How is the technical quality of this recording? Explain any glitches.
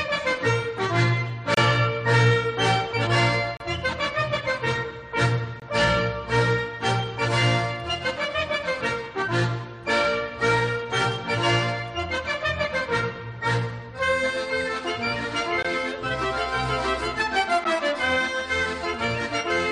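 The recording has brief, hard-edged dropouts. A gap between stream segments occurs at 1.54–1.57, 3.57–3.60, 5.60–5.62, 15.63 and 17.64 s. Misaligned timestamps at 2 s segment boundaries leave 10–32 ms holes, filled with silence, heard as abrupt interruptions.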